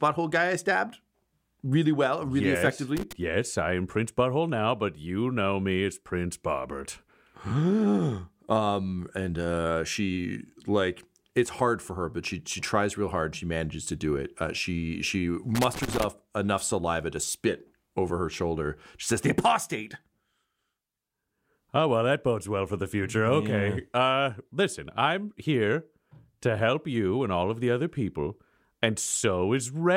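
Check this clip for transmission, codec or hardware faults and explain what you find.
Two bursts of loose connector crackle interrupt the speech, with no other transmission or codec faults.

From 2.97 to 3.13 s, after "really well really yes", and from 15.55 to 16.04 s, between "she she" and "enough saliva to spit", a worn contact rapidly makes and breaks, chopping the signal. This is heard as irregular scratching. The waveform shows jagged dropouts and spikes, and the spectrogram shows scattered broadband vertical streaks.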